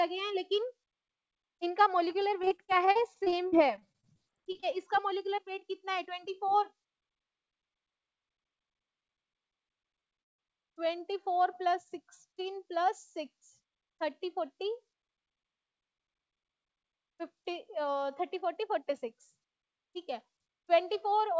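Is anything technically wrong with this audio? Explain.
Yes, there are three separate faults, all in the delivery of the audio over a call link. The audio has nothing above 8 kHz, which fits the G.722 wideband codec it passed through.

Repeated packet loss (robotic sound) runs from 2.42 to 4.64 s. Packets kept going missing, and each hole was patched by stretching the last bit of sound before the next hole arrived. The gaps are short, the longest about 40 ms, but they are close together. About a fifth of that stretch is filler, and roughly 0.38 s of real audio is gone. The result is choppy. Unlike a freeze, content is actually lost here, and the breaks repeat rather than happening once.

A call audio freeze occurs from 10.20 to 10.40 s. The likely cause is that packets were held up in transit and the jitter buffer ran dry. The receiver extended the last sound briefly and then fell silent for about 0.18 s. 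When the packets arrived, playback resumed exactly where it stopped. This is a single pause inserted into the audio, with nothing missing. That sets it apart from packet loss, where chunks vanish and the sound turns robotic.

Jitter buffer speed-up happens near the end, from 21.05 to 21.34 s. The buffer had built up more audio than it wanted, so the receiver trimmed many tiny pitch-period slices to catch up. About 50 ms was removed in total, and playback runs at about 113% speed. The pitch stays the same, so the sound simply seems hurried. A resampling or clock error would shift the pitch along with the speed, and this fault does not.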